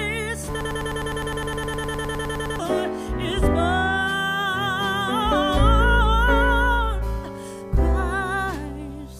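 A broken-record loop runs from 0.61 to 2.59 s: a fragment about 0.10 s long repeats exactly, back to back, 19 times, giving a rapid stutter. The likely cause is a stalled player, encoder or stream resending its last buffered piece, so the intervening sound is lost.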